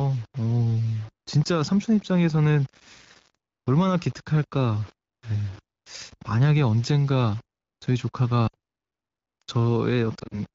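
The sample values are likely rounded to a very coarse grid, which fits about 6-bit depth without dither. Because nothing randomises the rounding, the error tracks the speech. A gritty, grainy distortion about 30 dB below the signal runs through the whole clip and grows harsher on quiet passages and decaying syllable tails.

At 8.48 s, lost AMR speech frames force the decoder to conceal 60 ms of audio by repeating the last good pitch and vocal tract settings at falling gain. The speech briefly drops to near silence, then recovers slightly thin.

From 10.19 to 10.40 s, more lost AMR speech frames total 80 ms, scattered over 140 ms with the longest run lasting 40 ms. Repeated concealment there gives a stuttering, wavering patch where the sound dips and turns rough before it recovers. The wideband AMR coding still holds the upper speech band around these dropouts.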